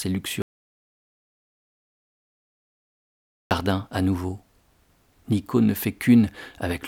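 At 0.42 s the speech cuts out completely. This is an audio dropout to silence. Nothing is heard until 3.51 s, about 3.1 s later. No room tone remains in the gap. The input was likely lost, while recording continued writing silence.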